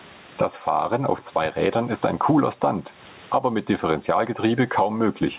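Gain pumping throughout: gain likely set far too high, a fast limiter clamping it, so background swells in pauses and dips about 20 dB under speech.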